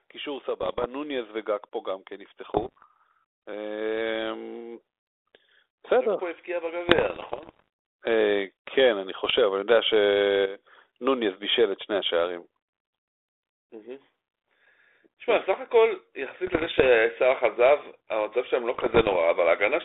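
From 0.16 to 4.88 s there is automatic gain rising. The gain control judged the input too quiet. It lifted its gain slowly, by about 7 dB over nearly five seconds. The speech and the background swell together, so the room noise grows as the speech grows. Nothing steps suddenly. The level just creeps up.

Bit errors on an ADPCM link land at 0.61 to 0.85 s, 2.54 to 2.85 s, 6.88 to 7.68 s, 9.25 to 9.39 s, 16.47 to 16.89 s and 18.74 to 19.16 s. Around one bit in a hundred was flipped, and about 1.5 in a hundred in the burst at 2.54 s. Each flipped bit also throws off the decoder's step size and prediction, so the damage rings on for a few milliseconds. The result is pops and rough, gritty bursts with brief jumps in level. The longest burst runs about 0.8 s from 6.88 s. The narrow telephone band fits a 32 kbit/s G.726 link.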